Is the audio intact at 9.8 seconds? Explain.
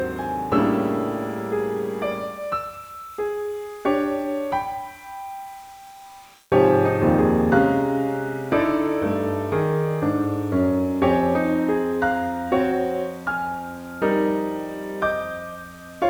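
No. At 9.8 seconds, as throughout the clip, timecode bleed is present. Linear timecode has leaked in from a nearby track or cable. Its square wave flips between pitches near 1 and 2 kHz at a 29.97-frame rate. A steady chirping warble sits about 35 dB below the sound.

Grainy distortion also runs through the whole clip and tracks the signal. Quiet passages turn gritty, with error about 30 dB below the sound. The likely cause is low bit depth without dither, consistent with 8-bit rounding.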